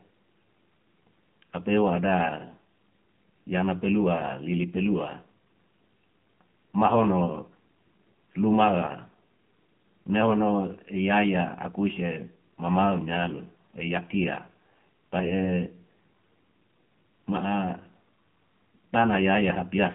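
From start to finish the speech carries the AMR narrowband mobile codec: everything sits in a 150 Hz to 3.4 kHz band, with a hard ceiling on the spectrogram. The plainly buzzy, synthetic texture fits the 7.4 kbps mode, where few pulses excite the vocal-tract model.

From 15.20 to 15.34 s, AMR bit errors appear. Flipped low-priority bits misplace excitation pulses, and the brief stretch, consistent with about seven damaged frames at a rate of around 2 percent, sounds hoarse and gargly at steady pitch and level, with smeared, noisy harmonics on the spectrogram.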